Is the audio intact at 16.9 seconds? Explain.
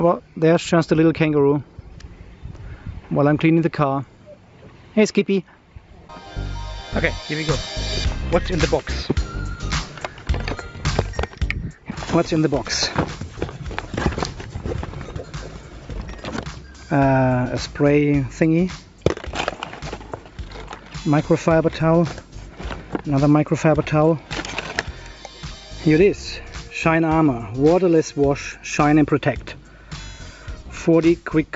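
Yes, at 16.9 seconds the audio runs intact, with no dropout, click, distortion or other fault to be heard at that point.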